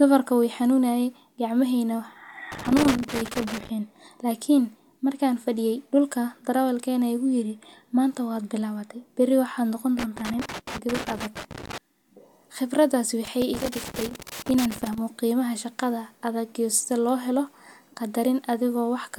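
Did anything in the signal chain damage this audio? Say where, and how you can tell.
Yes: loose connector crackle in the analogue wiring, 2.52–3.69 s, 9.99–11.78 s and 13.25–14.98 s; a worn contact intermittently breaks the speech signal, producing irregular scratchy bursts.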